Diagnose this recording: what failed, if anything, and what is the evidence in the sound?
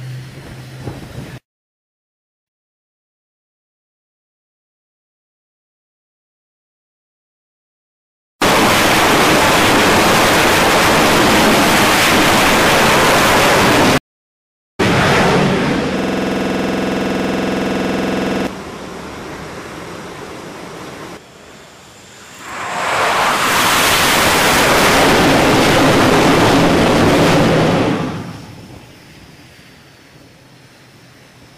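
Stream reconnect at the network and playback stage, twice. From 2.05 to 3.09 s there is a gap of about 405 ms, and the audio resumes 0.63 s earlier. From 13.98 to 14.81 s there is a gap of about 809 ms, and it resumes about 0.7 s later. On a waveform each gap is a flat dead section, followed by a restarted decoder picking up at a different point in the stream.

System hang loop at the driver and buffer stage, from 15.99 to 18.47 s. One 46.44 ms slice repeats 53 times at 21.5 Hz, which fits a 2048-sample ring buffer cycling while the host froze. It sounds like a buzzing stutter. The waveform shows identical repeated blocks, and the spectrogram shows evenly spaced vertical stripes.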